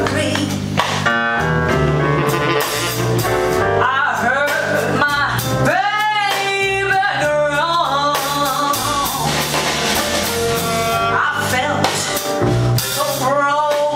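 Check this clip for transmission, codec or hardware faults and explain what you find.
Nothing here stands out as a transmission, codec or hardware problem, so there's no fault to report on this one.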